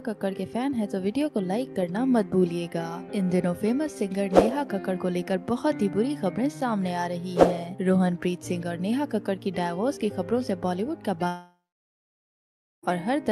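From 11.27 to 12.85 s, the sound suddenly stops. The last moment smears into a fading buzz for a few tenths of a second. About 1.27 s of silence follows. This is likely a long network dropout, and the missing 1.56 s never returns.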